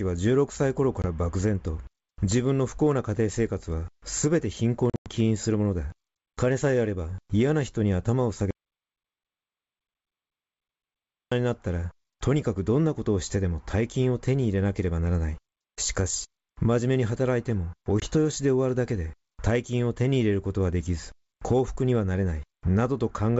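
At 1.02 to 1.06 s, 4.90 to 5.09 s and 18.00 to 18.07 s there is packet loss on an ADPCM call. Packets go missing and are filled with silence: 20 ms at the first and last spots, and 140 ms scattered over 160 ms in the middle, with a longest run of 100 ms and around seven packets lost there. Each hole shows as a sharp-edged blank column on a spectrogram. The decoder's predictor and step size then lag the sender's, so sound resumes slightly distorted before settling.

From 8.51 to 11.32 s comes an audio dropout to silence lasting 2.8 s, likely from lost input while recording continued. The waveform goes flat and the spectrogram goes fully dark, with no room tone. The sound cuts off and resumes mid-flow. The G.722 wideband coding at 64 kbit/s keeps the band up to 7 kHz clear.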